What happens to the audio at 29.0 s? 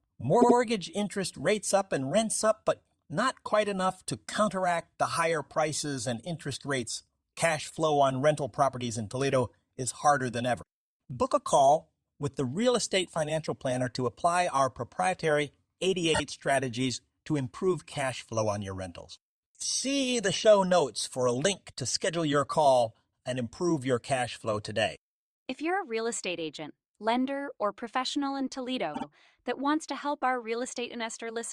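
Between 28.93 and 29.04 s, after "lender or professional in", repeated frames play a 52 ms compressed block twice more. The result is a stutter that lengthens the speech by about 0.1 s.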